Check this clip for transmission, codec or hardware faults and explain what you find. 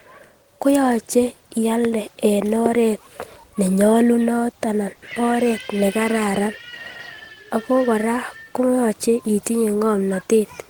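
Three kinds of fault are present: two loud pops, a call audio freeze, and a jitter buffer speed-up at the end.

Loud pops occur at 1.85 to 1.87 s and at 2.66 to 2.68 s. Each is a single sharp pop lasting about 20 ms. The first peaks roughly 10 dB above the speech, and the second is louder, roughly 15 dB above it. The speech carries on beneath both. The likely cause is a sudden voltage pulse, from a plug, switch, static discharge or driver glitch, entering the signal path and being shaped by the circuits after it.

A call audio freeze runs from 4.92 to 5.03 s, just before "oret nekararan". For about 100 ms the receiver had no fresh packets. It extended the last sound as a fading buzz or hiss rather than going silent. The likely cause is packets delayed in transit, which emptied the jitter buffer. Nothing was lost. The speech resumes where it stopped, now about 100 ms later than before.

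A jitter buffer speed-up starts at 9.86 s, after "koyoche itinye", and lasts to the end. The buffer had built up excess delay, so the receiver cut out short pitch-period-sized pieces many times in a row. Roughly 70 ms was removed in total. The speech plays at about 109% of normal speed with its pitch unchanged, so this last stretch sounds hurried.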